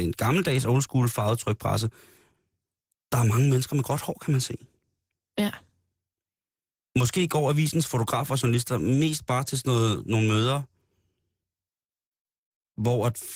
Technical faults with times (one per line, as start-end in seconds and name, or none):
0.00-13.36 Opus voice compression